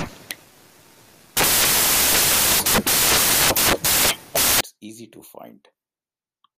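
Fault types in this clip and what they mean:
Samples built from the wrong bytes: the reader misassembles each sample's bytes, so the rapidly changing low-order bits land in the significant positions. From the start to 4.61 s the speech turns into loud, harsh broadband noise.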